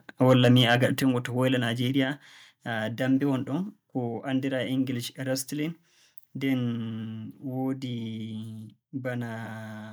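Microphone overload from 0.29 to 0.85 s: the speech peaks are flattened and sound harsh and crackly, likely from input gain driving about 4 dB past the converter's limit, clipping around one percent of samples.

Microphone volume stepped down at 1.02 s: speech and background drop abruptly by 6 dB, likely the call software cutting the microphone's input gain in one step after the distorted peaks.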